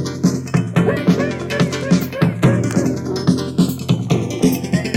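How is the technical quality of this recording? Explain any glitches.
The recording has one real problem, and it runs the whole way through: the channels drifting apart. The left and right sides behave as if they came from two devices on separate clocks, off by something like 100 parts per million. The gap between them slowly creeps toward about 0.4 milliseconds by the end. Fold it to mono and the resulting comb notches sweep gradually, so you hear a slow flanging across the sound.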